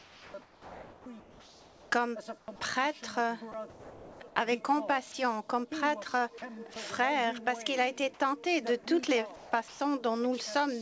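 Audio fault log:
0.0–1.9 s, 2.38–2.48 s and 9.36–9.8 s: comfort noise in place of the background. The real room tone turns flat and featureless, about 7 dB quieter around 2.4 s, likely from discontinuous transmission.
2.46 s: onset clipped by the voice detector. The sound jumps in without its soft start, about 20 ms missing, likely because the detector triggered late.
3.52–4.36 s: sound chopped by the voice detector. Bits of sound keep getting swapped for synthetic noise, so it's choppy, likely from the detector toggling.
5.12 s and 6.38–6.42 s: sound dropped by the voice detector. Brief slivers of sound give way to steady noise, likely read as background. All of this rides on a G.722 call path that has nothing above 8 kHz.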